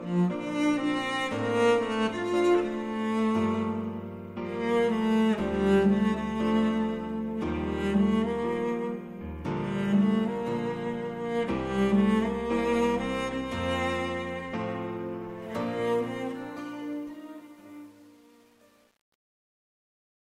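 The audio ends with a fade-out that starts around 15.4 s and runs to the end at 20.3 s. From 15.42 s to the end, the fade carries truncation distortion. The gain stage is dropping bits without dither, so the tail collapses into coarse square steps, which fits roughly 9-bit resolution. It is worst from 16.28 s onward, turning gritty. Unlike gate chatter, the grit follows the falling level rather than opening and closing.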